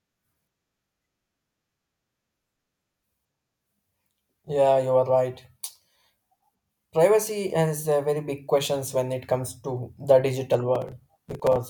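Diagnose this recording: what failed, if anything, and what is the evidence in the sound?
Near the end, from 10.75 to 11.56 s, right after "the digital", a gritty tearing crackle rides over the speech and then stops. This is processor overload crackle at the driver or buffer stage. The processor missed its deadlines on short buffers of a few milliseconds, around twenty times in quick succession. Each missed buffer replayed a fragment of old audio with hard edges, and those repeated, discontinuous slivers fuse into the rough crackling texture.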